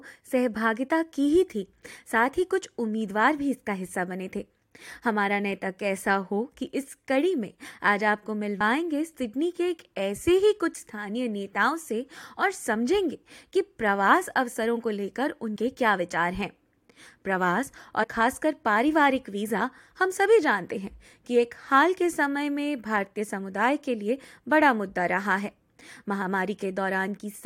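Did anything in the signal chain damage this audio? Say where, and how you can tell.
Yes, at the codec or storage stage: compressed frames were skipped. At 8.60 s, 15.55 s and 18.03 to 18.05 s the sound jumps forward, losing roughly 20, 40 and 70 ms. The jumps grow in steps that fit a frame of about 21.3 ms, roughly one, two and three frames. Whole frames were missing or discarded as damaged.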